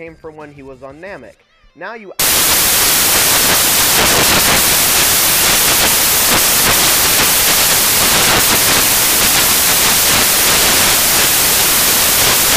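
From 2.2 s to the end, the audio becomes loud, harsh broadband noise. These are samples built from the wrong bytes: misaligned or swapped bytes push the low bits into the large part of each value.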